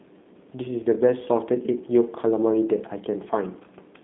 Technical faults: G.729 codec

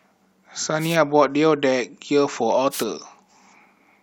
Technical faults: wireless microphone noise hit

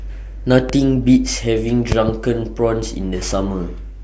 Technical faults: loud pop

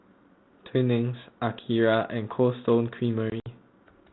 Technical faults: packet loss on an ADPCM call

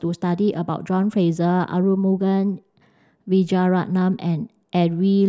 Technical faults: drift correction step

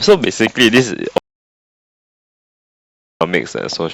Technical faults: audio dropout to silence

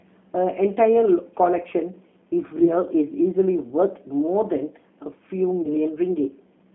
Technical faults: G.729 codec; VoIP packet loss concealed by the speech codec

